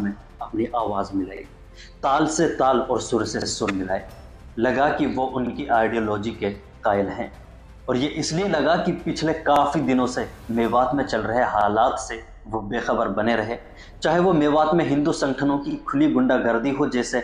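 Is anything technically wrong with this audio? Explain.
Yes. There are overlapping chunks at 1.37, 3.42, 5.47, 7.52, 9.56, 11.61, 13.66 and 15.71 s. The audio was handled in 2.0 s blocks, and each block begins about 48 ms before the previous one finished, so that slice of sound plays twice at every join. It is heard as a brief click or stutter roughly every two seconds. On a waveform, each join shows a short duplicated segment with a discontinuity at its edge. On a spectrogram, a vertical line appears there, and a thin strip of the pattern repeats.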